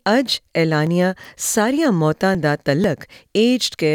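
Audio missing between chunks: brief skips at 0.37, 0.87, 1.85, 2.35 and 2.84 s, each dropping a few milliseconds with the two sides butted together. They fall on a half-second grid, likely a chunked recorder losing a sliver at each chunk changeover.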